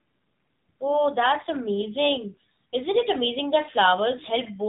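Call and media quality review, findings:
AMR narrowband mobile codec, throughout: speech band-limited, nothing above 3.8 kHz on spectrogram; buzzy, synthetic timbre, consistent with 7.4 kbps AMR-NB low-bitrate vocal-tract model, plainly audible codec damage.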